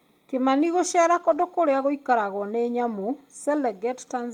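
Speech recording with a lost packet rebuilt from error correction between 1.15 and 1.41 s: about 140 ms plays from low-bitrate redundant copies, sounding rougher and noisier without any gap.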